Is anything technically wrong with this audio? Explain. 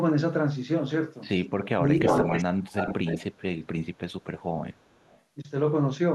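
Yes, two related echo-control problems show up.

From 1.74 to 1.99 s there's speech suppressed in double talk: the voice dips hard, roughly 25 dB at its deepest, for about a fifth of a second, likely because the echo canceller mistook overlapping talk for echo and clamped down.

Then there's echo leak at 2.03–2.44, 2.62–3.42, 3.84–4.24 and 4.73–5.22 s, a delayed copy about 0.3 s behind. It's likely a loudspeaker echo the canceller didn't fully remove. It starts nearly as loud as the voice, drops about 10 dB, then becomes barely audible.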